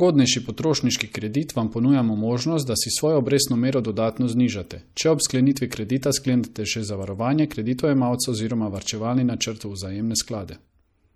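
Throughout the speech, treble sounds dulled and s sounds watery and chirpy, likely MP3 compression fitting about 64 kbps, cutting highs and zeroing weak frequencies.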